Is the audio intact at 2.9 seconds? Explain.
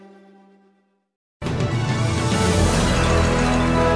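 Yes, the audio is intact at 2.9 seconds, with no fault of any kind at that moment.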